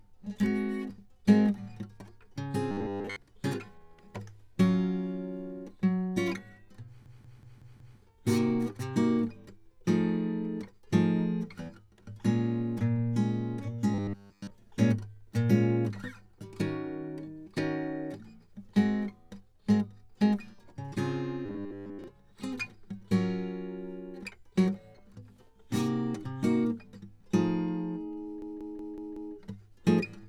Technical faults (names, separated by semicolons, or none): robotic sound from repeated short buffers; system hang loop